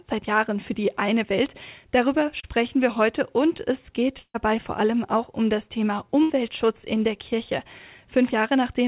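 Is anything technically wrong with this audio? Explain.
Yes. There are dropouts from packet loss in a call path whose sound stops at 4 kHz, which points to a narrowband telephone codec.

At 2.40 to 2.46 s there is a short concealed packet loss. About 40 ms of audio never arrived in time. The receiver extended the preceding sound for 32 ms and blended back in. It is heard as a brief smear or wobble.

There are bursts of packet loss at 4.19 to 4.37 s and 6.22 to 6.32 s. The receiver stretched the last sound and faded it out. In the first burst, 160 ms is missing, with 150 ms filled and 60 ms of silence. In the second, 80 ms is missing and 72 ms filled. Each burst is a held buzz or fading hiss, and the sound then jumps ahead.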